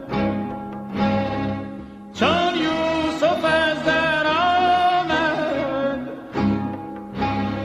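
No technical faults can be heard anywhere in the clip.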